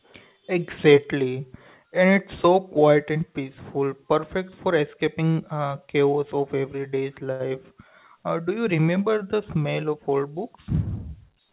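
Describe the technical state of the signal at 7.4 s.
At 7.4 s you're right inside a short stall from a late packet, running from about 7.32 to 7.42 s, just after "uh chaos of everyday's". A packet showed up late, the jitter buffer went dry, and the receiver held the last bit of sound for about 76 ms until it arrived, then picked up where it left off. Nothing's lost, but the sound hangs a touch too long with a slight buzz or dip, and everything after runs 76 ms later. It all sits inside the narrowband call path, where nothing reaches above 4 kHz.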